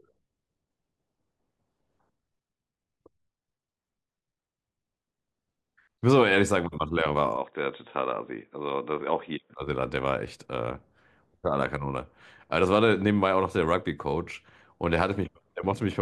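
From 7.37 s to 9.57 s the speech turns abruptly dull and boxy, with nothing above 3.8 kHz, then clears again. The likely cause is an input switched to a poorer device. There is no gap at either switch, the level stays about the same, and a faint new noise floor sits far below the speech. On a spectrogram the upper band goes empty in a clean block edged at 3.8 kHz. The waveform shows no break or jump.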